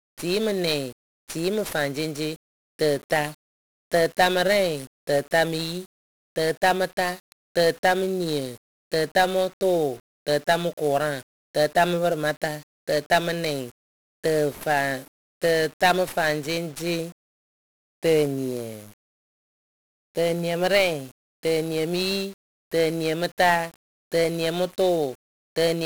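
From start to finish the speech carries 1-bit DFPWM compression, heavy throughout: each sample keeps a single up-or-down bit, so the waveform is only a rough tracking guess. The result is dense fuzz and crackle, treble drowned in hiss, fitting a roughly 48 kbps stream. Unlike the warbly, swirling artefacts of low-bitrate perceptual codecs, this damage is a constant gritty noise bed.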